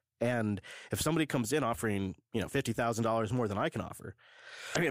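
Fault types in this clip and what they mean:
Damaged data in a compressed stream: near the very end of the speech, from about 4.72 to 4.77 s, corrupted bytes in the encoded file leave the decoder misreading a stretch of about 50 ms. It loses frame sync and hunts for the next valid header, which produces a brief chirp, squawk, click or short hole.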